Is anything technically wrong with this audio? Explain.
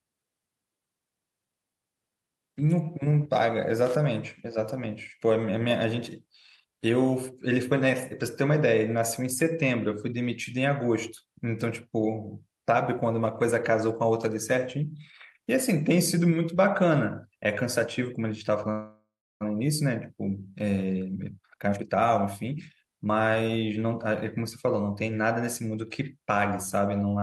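Yes, the speech has three separate faults.

From 3.86 to 3.95 s there is loose connector crackle: a worn or dirty contact making and breaking chops the signal, giving a brief irregular scratchy burst. The waveform shows jagged spikes and dropouts, and the spectrogram shows broadband vertical streaks.

From 18.71 to 19.43 s the call audio freezes. Packets were likely held up and the jitter buffer ran dry, so the last sound was stretched into a fading buzz, then about 0.31 s of silence. Nothing is lost, but 0.69 s of delay is added. The spectrogram shows smeared horizontal bands fading to blank.

From 20.8 to 25.06 s the jitter buffer speed-up removes short pitch-period pieces repeatedly to drain the added delay, cutting roughly 0.7 s. The speech runs at 116% speed but keeps its pitch and sounds hurried. The spectrogram shows compressed syllables with unchanged harmonic spacing.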